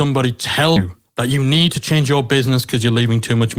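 At 0.76 s the speech has a skip ahead. Roughly a third of a second of audio never reaches the output, either lost in transit or discarded when the jitter buffer overflowed with later audio already queued. Playback jumps straight to the newer material with no fill, so the two sides of the cut butt together almost seamlessly. Whatever fell within that stretch is simply absent, and the delay through the receiver drops by about the same amount at that instant.

From 0.85 s to 2.00 s a jitter buffer speed-up follows. The buffer is still holding more audio than its target, so the receiver trims it by repeatedly cutting out short segments one or a few pitch periods long. In total about a tenth of a second is removed, and the speech runs at 109% of normal rate. The pitch stays unchanged, but the delivery sounds rushed and compressed over that span of just over a second.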